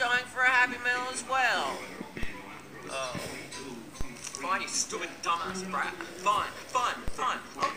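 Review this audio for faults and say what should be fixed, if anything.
Three DC steps occur, at 2.23 s, 4.01 s and 7.08 s. At each, the waveform's zero line jumps abruptly, by about -22 dBFS at the first two and about -21 dBFS at the last. Each jump is heard as a low thump under unchanged sound, and the offset then decays through a 5 Hz high-pass. To prevent this, stop converter recalibration or offset-carrying inputs from switching in mid-recording, and keep a DC-blocking high-pass in the input chain.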